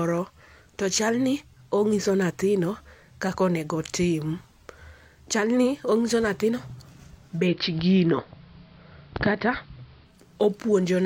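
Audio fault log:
0.64 to 11.05 s: clock slip clicks, faint regular ticks about every 0.7 s through the speech, likely two unsynchronised clocks dropping or repeating single samples.
7.33 to 10.19 s: digital radio blending to analogue, 160 ms cross-fade to AM, hiss about 40 dB down, level shifting about 2 dB.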